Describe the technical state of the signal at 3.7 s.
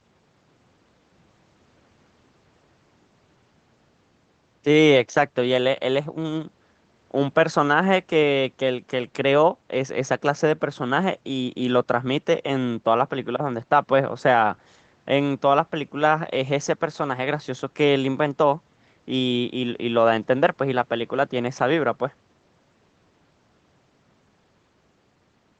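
At 3.7 s the speech is intact, with no dropout, glitch or distortion, only the band-limited, coded sound of the call path, which is audible as a top end ending around 8 kHz.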